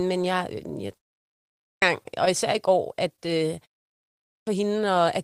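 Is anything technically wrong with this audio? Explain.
Yes, there are two kinds of fault. Clipped start after a pause, at 1.32 to 1.82 s and 3.94 to 4.47 s: the output device dozes off during brief silences and takes about half a second to wake, so the speech bursts in abruptly with its start missing. Short concealed packet loss, at 2.03 to 2.07 s and 3.16 to 3.20 s: about 20 ms never arrived, and the receiver patched the gap by extending the previous sound, leaving a quick smear or wobble.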